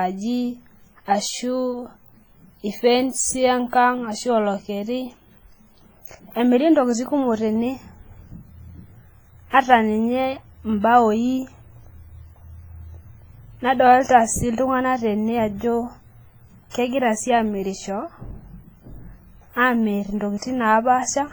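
Across the whole speech recording there's a washy, ringing smear, with hiss that swells and fades along with the signal and quieter detail dropped out entirely. The likely cause is heavy WMA compression at a low bitrate, which fits roughly 24 kbps.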